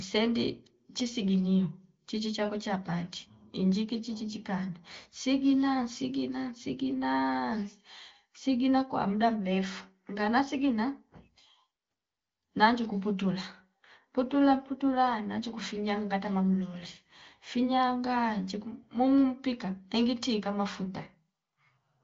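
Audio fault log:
No faults logged; the speech shows the band limit of an AMR wideband (HD Voice) codec, with nothing above 7.4 kHz.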